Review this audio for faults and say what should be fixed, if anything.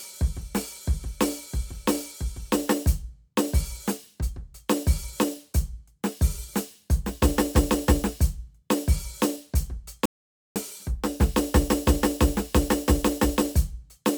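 At 10.06 s the music just drops out to dead silence and comes back at 10.56 s, so about half a second goes missing. That's an audio dropout to silence: the gap is silent, with no room tone or noise floor underneath. It's likely the input went away for a moment, through a loose connection, a flaky link or an accidental mute, while the recorder kept writing empty samples. The fix is to re-record or patch that spot. Check cables, links and mute states before rolling so the input can't quietly disappear mid-take.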